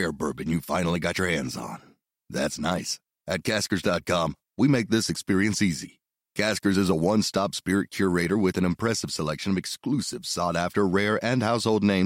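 No technical fault can be heard anywhere in this speech recording, and the signal holds steady throughout with nothing that calls for a time or a cause.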